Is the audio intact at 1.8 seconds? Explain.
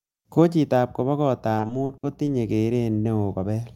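No. At 1.8 s the audio sits inside a stretch of repeated packet loss (robotic sound) running from 1.57 to 2.29 s. Six gaps, the longest 60 ms, are each patched by extending the preceding sound, concealing about a quarter of the span and leaving choppy speech with pieces missing.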